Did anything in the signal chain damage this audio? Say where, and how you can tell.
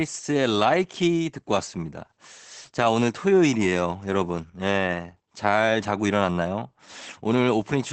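Yes, at the codec stage: Opus voice compression runs through the whole speech clip. Nothing reaches above about 8.7 kHz, and the speech sounds muffled, hoarse and faintly robotic, which points to Opus in its SILK linear-prediction mode at a wideband setting, around 12 kbps. A plain low-pass filter would only dull the top end. Here the coarsely coded excitation also roughens the voiced sound itself, which marks it as a low-bitrate codec.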